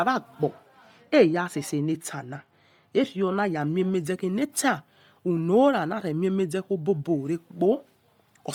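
From the start, the speech carries a breathy, grainy edge with noise-filled upper bands, likely Bluetooth LC3 compression at roughly 32 kbps. A spectrogram shows blocky 10 ms smearing and nothing above 20.3 kHz. Between 0.44 and 3.61 s, de-emphasis applied wrongly tilts the treble down smoothly, about 8 dB lower at 10 kHz than at 1 kHz. The audio sounds dull and muffled, and the spectrogram's upper region visibly darkens.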